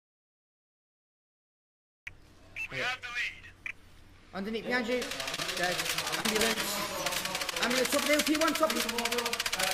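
From the start until 2.07 s there is silence, with no room tone or hiss underneath. The sound then begins abruptly mid-flow. This is an audio dropout to silence, likely caused by the input being lost while silence kept being written. The missing room tone distinguishes it from a quiet passage.

From 5.35 to 5.40 s, a short concealed packet loss causes a brief smear. Roughly 20 ms of audio never arrived, and the receiver filled about 25 ms by extending the preceding sound before blending back. The result is one isolated blip, not a run of them.

From 6.08 to 6.58 s, repeated packet loss produces a choppy, robotic stretch. Several short holes, the longest about 37 ms, were each patched by continuing the last sound, with about a fifth of that half-second concealed. The repetition sets it apart from a single glitch.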